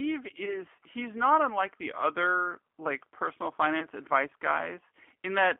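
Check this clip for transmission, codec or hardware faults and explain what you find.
The clip shows two faults: G.729 codec coloration throughout, and two brief dropouts of VoIP packet loss concealed by the speech codec.

G.729 codec damage runs the whole length and is plainly audible. The sound is consistent with an 8 kbit/s G.729A stream. The decoder rebuilds speech from a vocal tract filter, a pitch predictor and a few pulses per subframe, so it comes out rough and slightly synthetic. On a spectrogram, energy sits in a band from about 250 Hz to 3.4 kHz, with nothing above. Harmonics look smeared and grainy rather than cleanly striated.

VoIP packet loss concealed by the speech codec appears from 0.45 to 0.62 s and again from 3.80 to 3.86 s. Each event fits a single lost 20 ms packet. The decoder filled the gap by repeating its last pitch and filter settings at falling gain. Because each frame builds on the previous one, the first event stays disturbed for about 170 ms, beyond the gap itself. 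It is heard as a brief stretched buzzy tone or coloured noise that fades. On the waveform the envelope dips and flattens. The spectrogram shows a frozen, repeated spectrum instead of natural movement.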